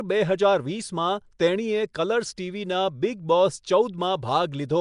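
From start to finish the speech carries a rough, hissy halo and a smeared, underwater quality, plainly audible throughout, which points to Nellymoser compression, likely from the Flash-era Nellymoser Asao codec at a rate that fits about 44 kbps. Weak bands get no bits and are filled with noise. On a spectrogram, energy stops sharply at 10.6 kHz, and the bands below show grainy, blocky noise patches in place of clean harmonic detail.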